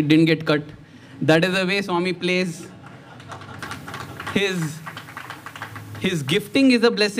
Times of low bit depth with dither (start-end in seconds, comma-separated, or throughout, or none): 3.59-6.56